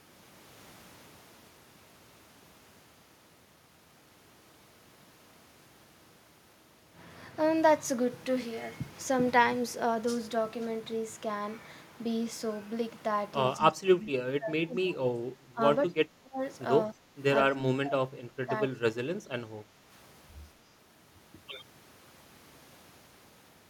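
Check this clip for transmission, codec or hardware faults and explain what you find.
One fault type recurs in a cluster in the second half. Speech suppressed in double talk occurs at 13.57–15.6, 15.88–16.4, 16.93–17.12, 17.5–18.5 and 18.68–19.36 s. The speech dips sharply, mostly by around 25 to 30 dB and by about 10 dB near 17 s, then returns in pieces. This is likely an echo canceller failing to separate the talker from overlapping loudspeaker echo and attenuating both.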